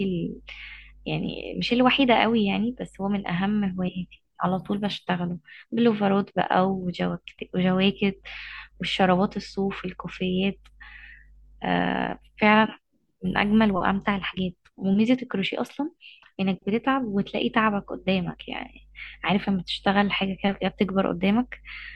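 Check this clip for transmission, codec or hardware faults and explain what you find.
No transmission, codec or hardware faults are audible anywhere in the recording.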